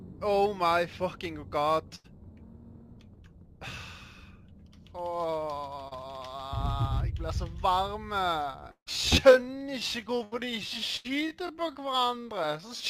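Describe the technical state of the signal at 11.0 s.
At 11.0 s two things overlap. First, you're inside a time-stretched section that runs from about 8.38 s to the end of the clip, with the pace slowed to roughly 0.62 times normal while the pitch stays put. It drags, and the likely cause is software stretching the audio to fill a length by repeating short pieces of it.

Second, right on that spot there's a burst of packet loss from about 10.97 to 11.06 s. The receiver had nothing to play for that stretch, so it carried the last bit of sound forward and faded it down over roughly 77 ms. You hear a brief held tail that dies away, and then the audio resumes with about 80 ms of the original simply gone.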